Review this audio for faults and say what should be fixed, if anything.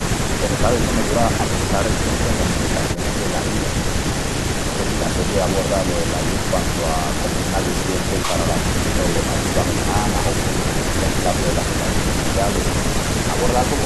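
Nothing to fix; no faults found anywhere in the speech.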